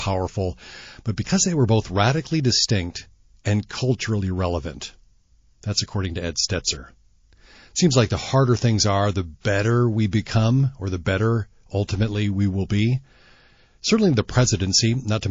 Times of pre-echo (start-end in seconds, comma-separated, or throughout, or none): 9.41-9.45, 14.57-14.60